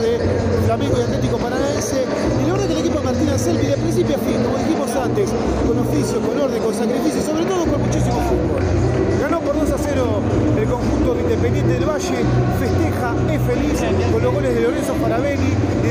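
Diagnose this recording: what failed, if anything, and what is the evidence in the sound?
Nothing in the sound points to a failure at any stage of the chain. There is no event to place on the timeline and no mechanism to diagnose.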